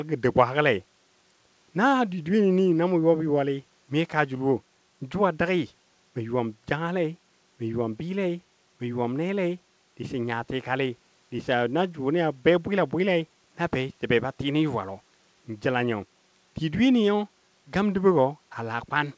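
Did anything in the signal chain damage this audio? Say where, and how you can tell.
No, nothing in the signal chain damaged this audio; the G.722 call path simply caps the band at 8 kHz, as that codec does.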